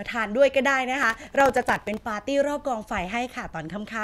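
From about 1.03 s to 2.00 s there's a burst of processor overload crackle: a gritty, tearing texture laid over the speech for roughly a second, then it clears. The processor kept missing its deadlines on very short buffers, well under a millisecond each, which sounds like dozens of misses in a row. Each miss replays a sliver of old audio with hard edges, and those stacked discontinuities are what you're hearing as crackle.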